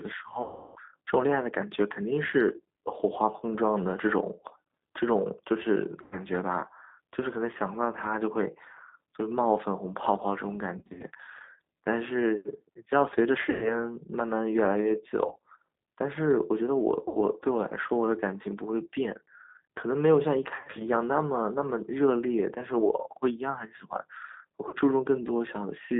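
The whole call passes through a G.729 codec at 8 kbit/s, which rebuilds speech from a vocal tract model and a few pulses per frame and keeps only about 200 Hz to 3.6 kHz. The speech sounds narrow, slightly rough and plainly synthetic throughout.

VoIP packet loss concealed by the speech codec strikes at 0.42–0.80 s, 6.02–6.18 s, 10.78–11.04 s, 13.50–13.75 s, 15.27–15.40 s, 17.08–17.18 s, 20.54–20.90 s and 24.69–24.76 s. The decoder stretches its last sound into a buzzy tone or coloured noise that fades. The first and longest gap covers about 340 ms. At 10.78, 15.27 and 20.54 s the losses come in scattered bursts. After each gap the speech stays weak or distorted briefly.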